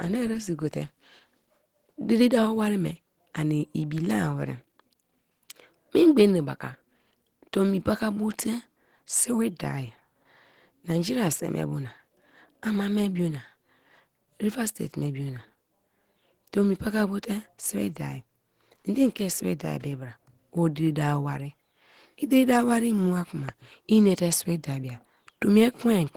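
All the way through, the speech has the grainy, hoarse texture of Opus compression, likely from hybrid mode at a low rate around 16 kbps.

At 23.49 s, between "diri dawo wari mua" and "inate sibi da bia", a single loud pop jumps out about 10 dB over the speech, likely a voltage glitch from a switch or static.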